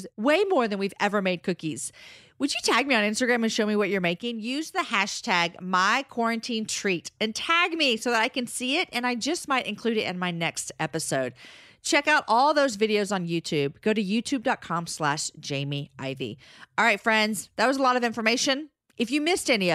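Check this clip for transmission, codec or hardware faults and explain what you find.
There's one fault, a sudden gain jump. From 4.18 to 4.78 s, right after "show me what you're" and ending before "hashtag my quarantine treat", the level drops about 5 dB with no ramp, background included, then snaps back. That's likely a digital gain step applied instantly.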